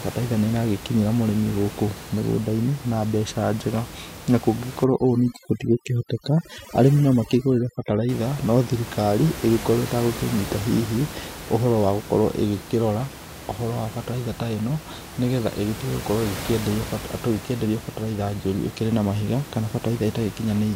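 Overdone noise removal, 4.84 to 8.09 s, before "no thirikari": the denoiser cuts bands near its noise estimate, leaving twinkling near-silence.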